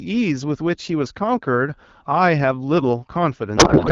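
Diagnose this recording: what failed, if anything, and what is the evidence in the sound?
From 3.57 s to the end of the clip at 3.92 s, the speech gives way to garbled noise and warble that barely tracks it. This is a codec payload misread at the codec stage: the AMR-WB decoder, which sounds clean at 12.65 kbit/s up to that point, is unpacking each frame's bits with the wrong layout. The fields land in the wrong places, so valid-looking frames decode to nonsense. The pattern fits octet-aligned AMR being read as bandwidth-efficient.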